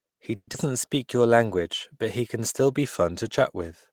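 Speech clip with three faults. From 0.35 to 0.56 s there is a long network dropout, likely: about 190 ms of fading concealment fill, 50 ms of silence, and 80 ms of lost audio, with a delay shift of around 50 ms. From 0.67 to 1.28 s a jitter buffer slow-down repeats fragments to add 68 ms, so playback runs at 90% speed at unchanged pitch and sounds drawn out. From 2.84 s to the end a drift correction step, likely, slows playback by 5.3% and drops pitch by about 94 cents, an audible detuning of nearly a semitone.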